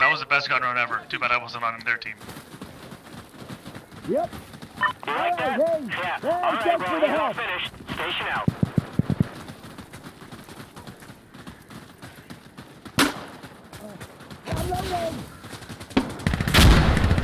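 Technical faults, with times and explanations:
No technical faults can be heard anywhere in the audio. There is nothing to list for any time or range.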